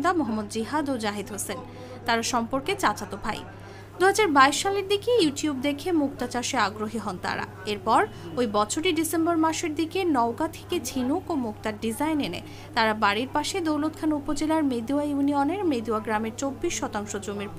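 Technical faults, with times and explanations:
2.37 s and 15.23 s, bit error spike: each is a single corrupted sample reaching about -26 dBFS, heard as one short, sharp tick. A flipped bit in memory or on a digital link makes that sample jump by a power of two and return at the next sample. An impulse one sample wide has energy spread evenly across the spectrum, so the tick has no pitch and no relation to the surrounding audio.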